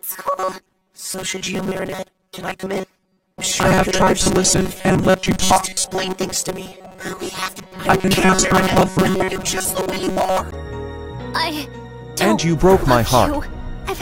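From 0.01 s to 10.4 s the sound takes on a robotic quality from repeated short buffers: a rigid, metallic buzz at 188 Hz that only loosely tracks the underlying audio. The likely cause is audio arriving too seldom, so the last chunk of roughly 5.3 ms is replayed over and over, covering most of that stretch. A spectrogram shows flat, evenly spaced harmonic lines at multiples of 188 Hz; the waveform shows identical cycles repeating.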